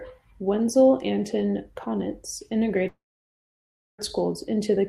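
A long network dropout runs from 2.87 s to 4.10 s in this speech. The break is most likely a stall in the packet stream: for about 1.1 s nothing usable reached the receiver, which stretched the last sound into a brief fading buzz before settling into roughly a second of silence. When the speech resumes at 4.10 s, it picks up further along, so about 1.12 s of the original is gone rather than delayed.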